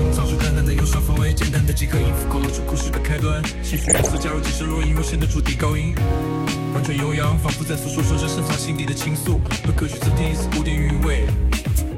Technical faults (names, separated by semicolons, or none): DAB burbling; GSM signalling bursts